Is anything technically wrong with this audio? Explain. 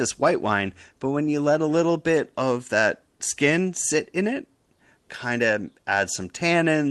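No, nothing in this speech clip stood out as a technical problem on listening.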